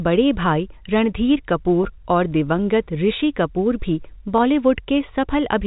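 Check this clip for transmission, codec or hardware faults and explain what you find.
Two brief dropouts show up in the speech, at 1.84 s and 4.38 s.

Packet loss with pitch repetition at 1.84 s and 4.38 s: each time about 10 ms of audio went missing, which fits a single lost packet. The receiver concealed each gap by replaying the most recent pitch period, with a fade that would take about 50 ms to reach silence. At 10 ms each gap is filled well before the fade goes far, so both spots sound like a tiny held, slightly buzzy stretch of the sound rather than a silence. The G.711 telephone coding carrying the call keeps the audio below 4 kHz.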